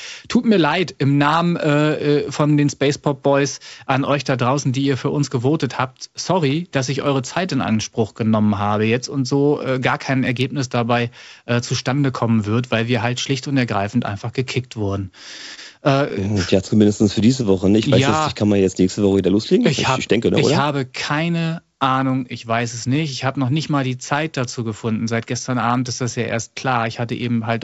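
Right after "ergreifend einfach gekickt wurden", between 15.55 and 15.59 s, one sound hangs on for a moment too long. This is a short stall from a late packet: the jitter buffer ran dry, so the receiver stretched the last sound for about 26 ms until the packet turned up, then carried on from the same point. Nothing is lost, but the playout delay grows by 26 ms.

From 16.09 to 17.61 s come scattered short gaps, about seven tiny ticks and smears spread across the stretch, none longer than about 15 ms. Each marks a packet that was lost or late, which the receiver covered by extending the preceding sound. In total roughly a tenth of a second is patched, around 7 percent of the span. The speech stays mostly clear between the gaps and gains 10 ms of delay.

Between 17.72 and 19.93 s, leading into "ich denke ne ich", the speech drags to 95 percent of its normal speed while the pitch holds steady, with a few drawn-out sounds. 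This is a jitter buffer slow-down: with its reserve low, the receiver repeated single pitch periods and fragments of pauses again and again, adding 122 ms of audio to rebuild the buffer.

After "ne ich habe keine", from 21.88 to 23.99 s, the speech turns hurried, running at 106 percent speed at unchanged pitch. This is a jitter buffer speed-up: the buffer had built up more audio than it targets, so the receiver trimmed short pieces of one or a few pitch periods in quick succession. Roughly 150 ms is removed. The whole clip has no content above 8 kHz, consistent with G.722 coding at 64 kbps on the call path.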